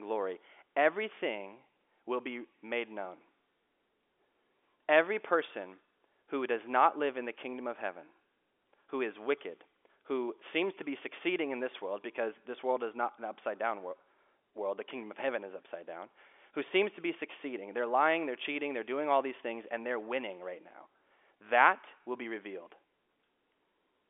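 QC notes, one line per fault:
No faults detected.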